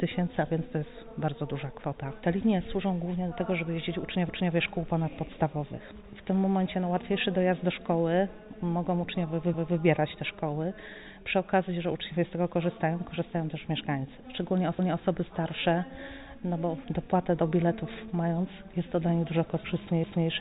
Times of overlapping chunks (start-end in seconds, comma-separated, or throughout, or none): 4.29-4.54, 14.79-15.04, 20.04-20.29